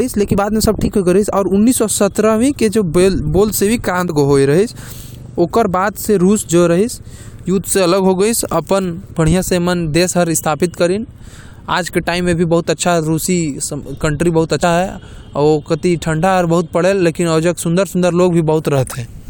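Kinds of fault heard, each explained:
Damaged data in a compressed stream: corrupted bytes make the decoder misread frames and hunt for the next header, giving five brief glitches, each under 20 ms.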